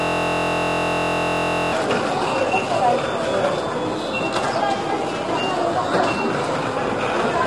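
From the very start until 1.72 s, the audio is caught in a system hang loop that is already running when the clip begins. A 23.22 ms slice, which fits a 1024-sample buffer, repeats exactly 73 times while the playback hardware keeps cycling the same memory. It sounds like a steady buzz at 43.1 Hz. On a waveform, identical blocks tile end to end. A spectrogram shows evenly spaced vertical lines and a comb of harmonics at 43.1 Hz multiples.

Across the whole clip there is a rough, grainy texture. Noise fills the gaps between tonal components, and the top band is missing, with nothing above 11.6 kHz. This is likely low-delay AAC compression of the AAC-ELD kind, at a low bitrate in the region of 32 kbps. Its short frames resolve fine frequency detail poorly, so the damage is plainly audible. A spectrogram shows a hard ceiling at 11.6 kHz and smeared, blotchy energy below it.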